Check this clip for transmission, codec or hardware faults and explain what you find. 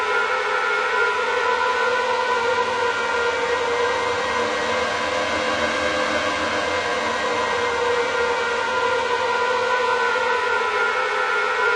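One fault is present: compressed frames skipped at 7.52 s. Around three frames of roughly 21.3 ms each, about 70 ms of audio, were never decoded, so the sound jumps ahead at the join. Unlike a dropout, no silent gap is inserted; the missing stretch simply vanishes.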